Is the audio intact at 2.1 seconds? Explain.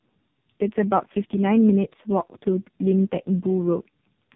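No. At 2.1 seconds, as across the whole clip, the speech shows tandem speech coding. It sounds like it passed through about three speech codecs in a row, with the latest fitting low-rate AMR-NB, each re-encoding the previous one's errors. The result is rough, muffled and warbly. A spectrogram shows nothing above 3.6 kHz and harmonics that are smeared and unsteady. The waveform has a blurred, grainy envelope rather than crisp onsets.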